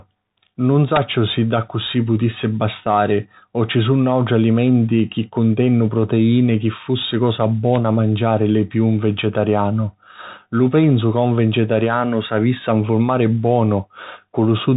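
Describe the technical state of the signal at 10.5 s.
At 10.5 s you're hearing the Bluetooth CVSD headset codec, which runs through the whole clip. It codes the speech one bit at a time as up-or-down steps, which fits a 64 kbps link. Everything above 3.8 kHz is gone, sibilants come out scratchy, and a granular hiss sits underneath.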